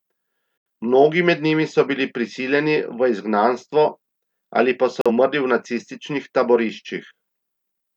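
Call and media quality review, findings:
Digital broadcast dropout, 0.58–0.66 s: abrupt mute of about 85 ms, then resumption. Receiver lost lock or rejected frames on checksum and muted until valid frames arrived. The length fits two consecutive frames of roughly 43 ms. Digital broadcast dropout, 5.01–5.11 s, right after "ali pa": shorter hole, consistent with one lost frame. Same receiver mute behaviour. Speech sent during both gaps is unrecoverable.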